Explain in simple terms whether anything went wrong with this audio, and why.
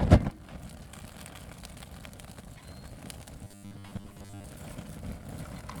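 From 3.44 to 4.44 s the sound turns into a stiff, metallic 100 Hz buzz: robotic sound from repeated short buffers. New audio likely arrived too slowly, so the player kept looping a tiny 10 ms chunk, covering most of that second while the real audio got skipped.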